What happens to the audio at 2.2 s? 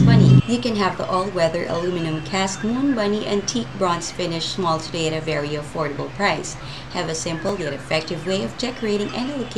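Nothing goes wrong at 2.2 s; the audio plays through that moment intact, with no dropout, click or other fault.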